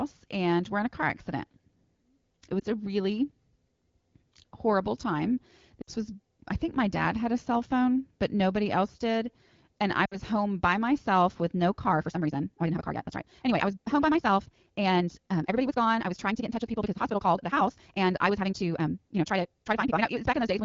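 Radio errors corrupted AMR speech frames on this wideband call, and the decoder concealed each one by repeating its last good settings at fading gain. At 2.59 s, just before "a really", a 20 ms dip fits a single lost frame. Between "horrible time" and "was I think my" (5.81 to 5.89 s), and again at 10.05 to 10.17 s before "home by myself with", 60 ms runs of lost AMR speech frames drop the sound to near silence briefly.

From 11.82 s to the end, the pace abruptly doubles while pitch stays unchanged, the likely result of a time-stretched section squeezed by software that dropped short pieces to fit a length, leaving the audio rushed under the light AMR-WB coding.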